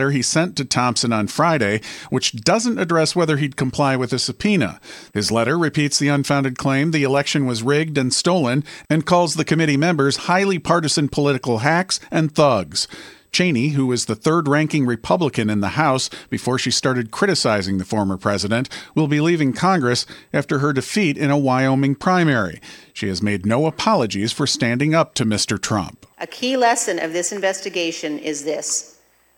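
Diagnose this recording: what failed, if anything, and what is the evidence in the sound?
The failure is in the analogue wiring and power: USB whine runs the whole way through the speech, a fixed tone at 8 kHz with its strongest part at the 16 kHz harmonic, sitting faint, roughly 45 dB under. That's the 125-microsecond microframe current leaking through ground or supply.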